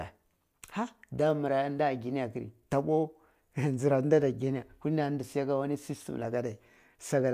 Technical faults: none

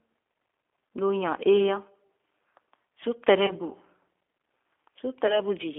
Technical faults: G.729 codec; VoIP packet loss concealed by the speech codec

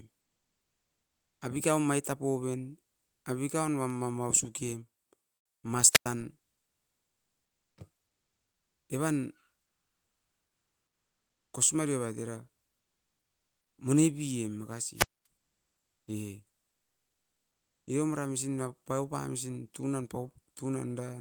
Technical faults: comfort noise in place of the background; wireless microphone squelch dropout

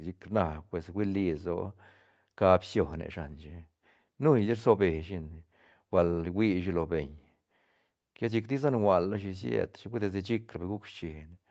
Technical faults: none

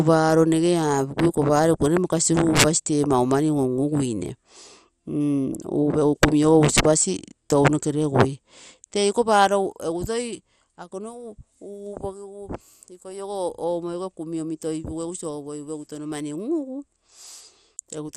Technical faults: MP2 compression

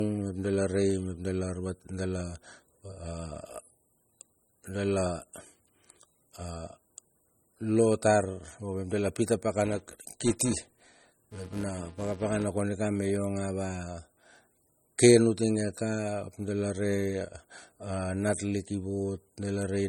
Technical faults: low-bitrate audio saved at a high bitrate; filter restarted on every block

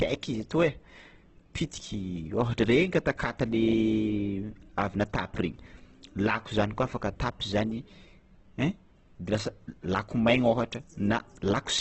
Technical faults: Opus compression

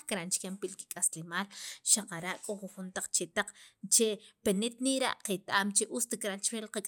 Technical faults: none

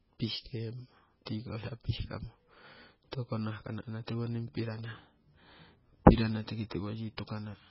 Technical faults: MP3 compression

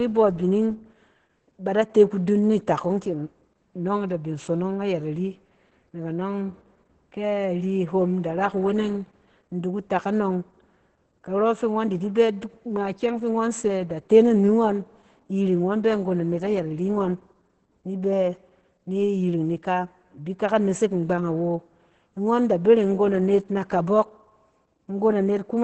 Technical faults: Opus voice compression

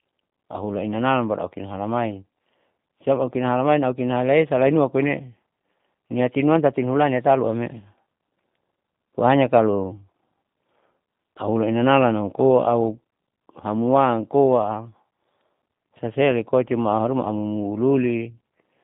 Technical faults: G.729 codec

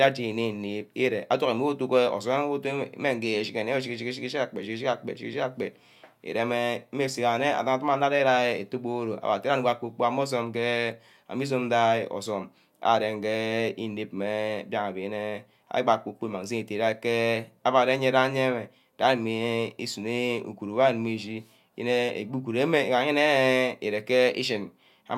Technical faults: none

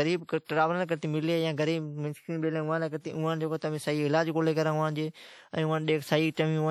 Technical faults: WMA compression; pre-echo

